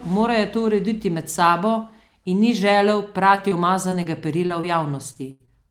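From 3.35 s to 5.49 s the speech turns choppy and robotic, with pieces missing. This is repeated packet loss: nine short holes, the longest 82 ms, each patched by extending the preceding sound, about 240 ms concealed in total.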